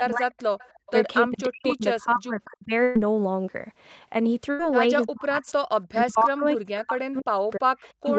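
Speech suppressed in double talk, 0.01 to 0.34 s: the voice dips by roughly 30 dB for about 0.3 s. This is likely an echo canceller facing both sides talking at once; unable to separate the near talker from loudspeaker echo, it turned everything down.

Echo leak, 0.37 to 0.92 s: a faint delayed copy of the voice trails it by 305 ms, about 25 dB below the speech. A loudspeaker's echo canceller likely failed to remove all of what its microphone picked up and sent the remainder back.

Background gated by the echo canceller, 0.71 to 0.86 s: during that echo, the room sound drops by about 36 dB for roughly 150 ms, then returns. The canceller clamped the microphone hard while the loudspeaker played and released it afterwards.

Speech suppressed in double talk again, 1.26 to 2.72 s: the voice sinks by up to roughly 40 dB across about a second and a half.

Burst of packet loss, 2.83 to 2.98 s: about 120 ms of audio is missing. 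The receiver continued the last sound, fading it, before the speech resumes further on. A second burst at 4.51 to 4.62 s hides about 80 ms the same way.

Speech suppressed in double talk, 5.05 s to the end: deep dips of up to roughly 40 dB pull the voice down through the final stretch.

Echo leak again, 7.15 to 7.19 s and 7.85 to 8.09 s: brief 305 ms-delayed scraps return, about 35 and 30 dB below the speech. All of this sits within a band ending at 8 kHz, which fits the Opus call path.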